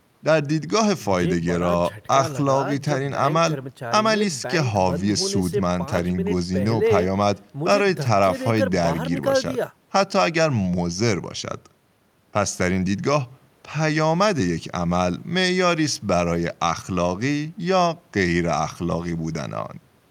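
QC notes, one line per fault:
No faults were heard in this speech clip. There is nothing to log against it.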